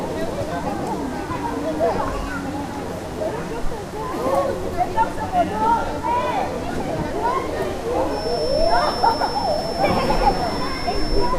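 A clip of everyday sounds, and from 8.04 s right through to the end at 11.38 s there's a feedback whistle sitting behind it: a thin, steady tone around 5.4 kHz, roughly 15 dB under the main sound, swelling and fading slowly in level. That's likely a loudspeaker-to-microphone loop hovering just at the edge of feedback, so the one frequency keeps ringing without building up into a full howl.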